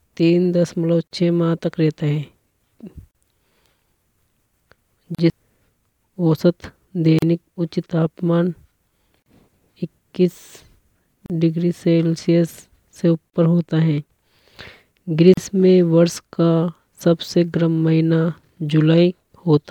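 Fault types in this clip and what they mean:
Gap at a join of encoded pieces: untrimmed encoder delay and last-frame padding open a 37 to 38 ms silence in the speech every 2 s, from 1.07 s.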